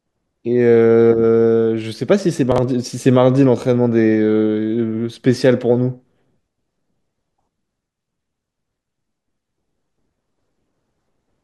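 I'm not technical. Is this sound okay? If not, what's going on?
No. At 2.52 to 2.58 s there are chunks out of order: a slice of sound about 21 ms long arrived late and played two slices after its proper place. Nothing is missing, but that brief moment sounds jumbled.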